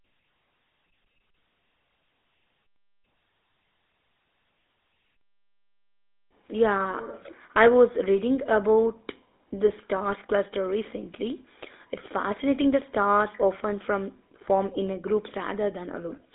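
Speech runs its whole length through a GSM full-rate codec, with buzzy, gravelly roughness from pulse-driven vocal-tract coding that fits a 13 kbps link. A spectrogram shows energy confined to roughly 250 Hz to 3.6 kHz and an empty region above 3.8 kHz.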